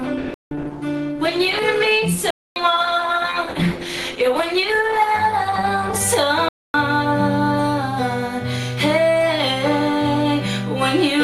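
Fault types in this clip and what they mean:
Adaptive stream starting at a low bitrate: The player began on a cheap version of the stream, then switched up once the connection was measured. For the first 6 seconds nothing sits above 12.1 kHz and artefacts are heavier, which points to roughly 16 kbit/s Opus. Then quality jumps without a gap.
Block of digital silence: Chunks of samples were replaced with zeros, so the sound drops out abruptly. Holes occur at 0.34 to 0.51 s, 2.30 to 2.56 s and 6.49 to 6.74 s. The first, about 171 ms, fits an 8192-sample block.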